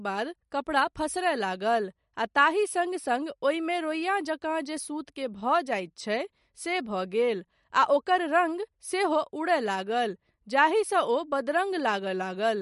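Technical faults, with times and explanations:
Throughout, MP3 compression: the speech has nothing above 11.2 kHz and plainly audible coding damage, likely from an encoder short of bits, consistent with about 48 kbps, dropping the treble and weaker detail. A simple low-pass filter would remove the treble without damaging what remains.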